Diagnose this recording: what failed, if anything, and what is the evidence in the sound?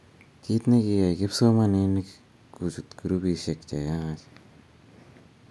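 Nothing in this speech recording points to a failure at any stage of the chain. There is no audible evidence of a fault to diagnose.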